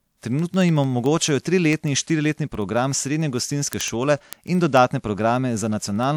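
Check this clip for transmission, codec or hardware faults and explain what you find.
One hardware fault runs through the speech: word clock ticks, from 0.17 s to 6.11 s. The receiving device isn't locked to the sender's clock, which is off by a few hundred ppm. Roughly every 70 ms, one sample slips. Around seventy sharp ticks result, steady in rate.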